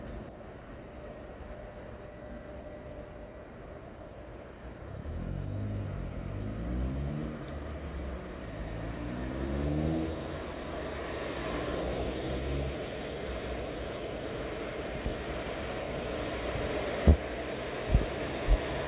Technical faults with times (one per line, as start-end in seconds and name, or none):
none